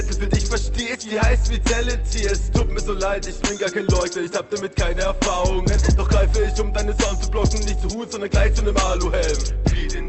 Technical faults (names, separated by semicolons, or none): none